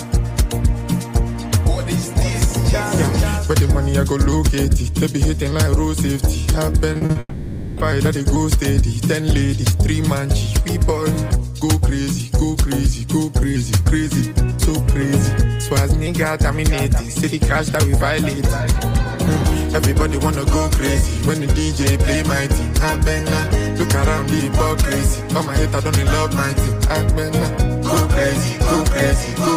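From 6.93 to 7.17 s there is repeated packet loss with a robotic sound. Four short holes, the longest 40 ms, were patched by repeating the preceding sound, so over half of this stretch is concealment. It sounds choppy, with pieces missing. A spectrogram shows blocky, smeared patches.

From 7.19 to 7.79 s the sound stops progressing and is held as a buzzy, fading smear, ending in about 30 ms of near-silence. This is likely a long network dropout. On a spectrogram it appears as flat horizontal streaks, and the waveform shows a decaying envelope.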